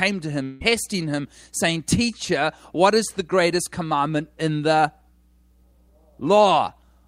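From 0.43 to 0.63 s, the speech gives way to a fading buzz lasting about 0.17 s, with no silence, then resumes at "him saying" with about 0.18 s skipped, not delayed. That lost stretch marks a likely long network dropout rather than a brief glitch.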